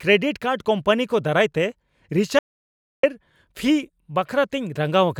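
Speech, with an audio dropout to silence from 2.39 to 3.03 s: about 0.64 s vanishes mid-flow, likely because the input cut out while recording continued. The waveform drops to a flat line and the spectrogram shows an empty column, without even room tone.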